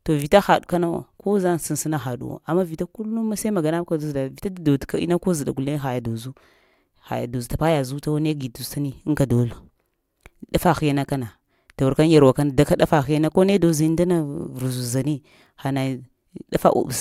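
No technical faults are audible.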